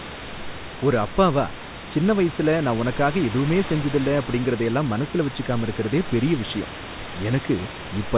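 No faults: the speech sits over room noise about 11 dB below it, with a much quieter layer about 35 dB down, and nothing above 4 kHz, which fits a narrowband call path such as G.711 A-law.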